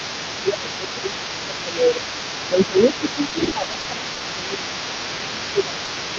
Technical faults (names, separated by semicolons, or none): other side's voice leaking through; speech suppressed in double talk; repeated packet loss (robotic sound); short stall from a late packet; short concealed packet loss